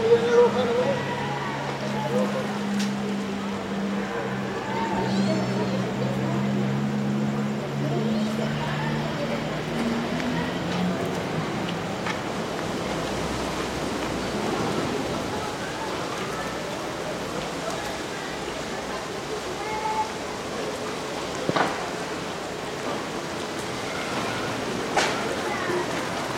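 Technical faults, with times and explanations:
No technical faults can be heard in this recording of sounds, and the signal stays intact the whole way.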